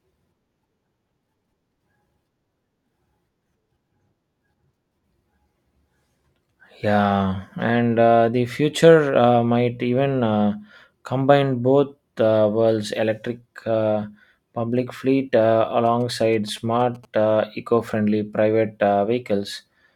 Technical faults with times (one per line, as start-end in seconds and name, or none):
15.86-17.05 GSM signalling bursts